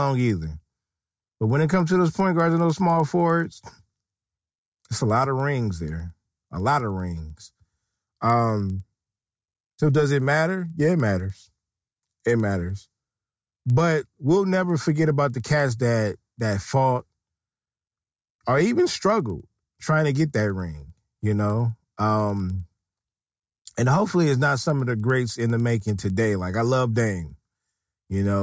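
A speech recording marred throughout by a resampler restarted on every block: converting 48 kHz to 16 kHz in isolated 100 ms blocks leaves an error at each edge, producing ticks at a steady 10 Hz that vanish in pauses, unlike mains hum, which persists through silence.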